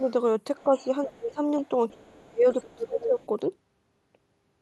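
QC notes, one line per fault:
0.57 to 0.85 s, other side's voice leaking through: a faint second voice, around 30 dB under the talker, most likely echo that the canceller didn't fully strip from the mic.
0.64 to 0.85 s, speech suppressed in double talk: the talker dips by roughly 10 dB for about 150 ms, likely the canceller ducking everything while both sides overlap.
1.06 to 1.4 s, speech suppressed in double talk: a deeper drop, around 20 dB, pulling down about 300 ms of the talker, likely from the canceller confusing them with the loudspeaker echo.
1.22 to 1.28 s, other side's voice leaking through: a short, fairly loud scrap of the far voice, only about 10 dB down, likely residual echo slipping past the canceller.
1.6 to 1.68 s, other side's voice leaking through: a barely audible blip of the far voice, roughly 40 dB below the talker, likely leftover loudspeaker echo.
1.94 to 3.19 s, speech suppressed in double talk: the talker gets pushed down hard, around 30 dB at worst, across about a second, likely the canceller clamping during overlap.
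2.5 to 3.27 s, other side's voice leaking through: a longer, prominent stretch of the far voice, only about 10 dB under, likely uncancelled echo sitting over the suppressed talker.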